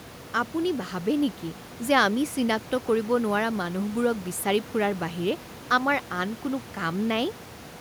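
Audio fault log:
No faults found.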